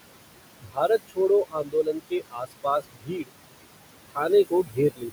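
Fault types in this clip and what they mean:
Noise suppressor artifacts: Across the whole clip a noise suppressor pulls down the frequency bands it judges to be steady background, working frame by frame. The room noise sits about 12 dB below the speech, and the suppressor cuts it by about 21 dB. So the background drops away in the gaps and swells back up under the speech.
Speech cut by the noise suppressor: In places the suppressor mistakes parts of the speech for noise and turns them down along with the background. This happens from 0.6 to 1.18 s, from 1.45 to 3.32 s, from 4.45 to 4.78 s and from 4.94 to 5.11 s. The drops reach about 16 to 22 dB. The longest stretch loses roughly one and a half seconds of speech. Soft consonants and quiet syllables sound swallowed or faded.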